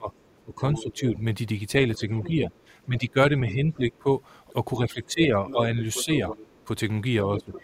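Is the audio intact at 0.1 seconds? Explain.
No, it isn't. From 0.0 to 1.17 s you're hearing speech suppressed in double talk: the level dips, by about 15 dB at worst and for roughly half a second in total, likely because the echo canceller couldn't separate the talker from loudspeaker echo and turned both down.

Overlapping that, from 0.13 to 1.0 s, there's the other side's voice leaking through, sitting about 15 dB under the speech. That's likely echo the canceller failed to remove from the microphone, so the far end's audio slips in underneath.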